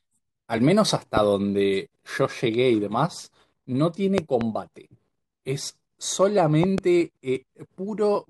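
A loud pop hits at 1.17 to 1.19 s, a single sharp crack standing about 15 dB above the speech. At 4.18 to 4.43 s comes a double pop, about 20 dB up, and at 6.64 to 6.80 s another pair at about 15 dB. Each is most likely a sudden voltage step from a plug, switch or static discharge, shaped into a brief thump by the downstream circuitry while the speech continues underneath.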